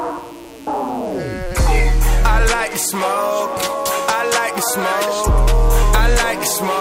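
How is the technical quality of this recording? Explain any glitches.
The recording carries a continuous fault from start to finish: a mains buzz sitting roughly 30 dB below the wanted signal. It is present for the whole clip rather than at any particular moment. Its fundamental is 60 Hz, and its harmonics stack up well into the kilohertz range. Something like a dimmer, a rectifier or an unshielded cable is letting sharp switching spikes into the signal path twice per mains cycle, 120 times a second. The result is a raspy, edgy drone. A plain mains hum would be a smooth, low tone of mostly 60 Hz; this buzz sounds bright and gritty.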